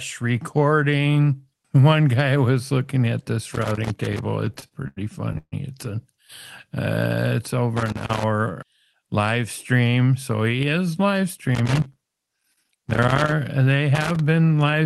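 Loose connector crackle first appears from 3.53 to 4.19 s, right after "was looking at this". A worn or dirty contact keeps making and breaking, chopping the signal into irregular bursts of scratchy crackle. The same crackle returns at 7.77 to 8.24 s, 11.55 to 13.32 s (after "so he is live") and 13.95 to 14.20 s.

Repeated stalls (stutter) run from 4.45 to 5.54 s. Late-arriving packets left the jitter buffer empty seven times, and each time the receiver stretched the last sound to fill the wait, for about 317 ms in total and up to 142 ms at once. Nothing is lost, but the sound drags and stutters.

Jitter buffer speed-up runs from 8.49 to 9.37 s, ending just before "stream so he is". Too much audio had built up in the buffer, so the receiver trimmed short pitch-period slices, around 70 ms overall. That sets the passage about 7% faster at unchanged pitch, so it sounds hurried.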